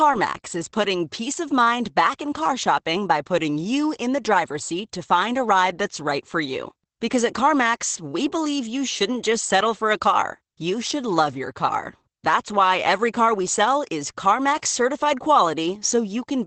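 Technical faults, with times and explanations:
Throughout: Opus voice compression. The speech has a muffled, hoarse and faintly robotic quality, and there's essentially nothing above about 8.7 kHz. That fits Opus running in its SILK linear-prediction mode at a low bitrate, something like 12 kbps, limited to wideband. SILK models the voice as a filter driven by an excitation signal, and at this rate the excitation is coded coarsely, so the damage is plainly audible as that buzzy, roughened texture. The narrowed band accounts for the dull top end.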